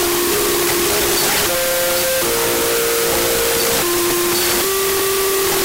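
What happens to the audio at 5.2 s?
At 5.2 s the wrong sample width fault is still present, as it is for the whole clip. Data written as 16-bit integers are being read as unsigned 8-bit, so each sample splits into two, one built from its high byte and one from its low byte. The result is loud hiss with the original faintly underneath, at half speed and an octave low. The halved speed separates it from a byte-order swap.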